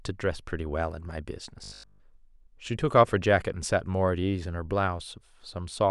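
Robotic sound from repeated short buffers, 1.64 to 2.02 s: speech turns into a rigid 50 Hz buzz, likely one 20 ms buffer repeated throughout.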